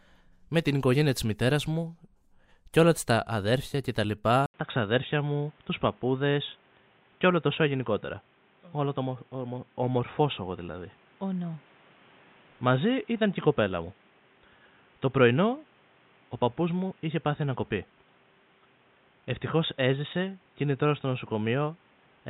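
At 4.46 s the input was likely switched to a poorer device, with an 80 ms silence at the switch. From there to the end the speech is cut off above 3.8 kHz and sounds dull and boxy, at much the same level, over a new noise floor roughly 35 dB down.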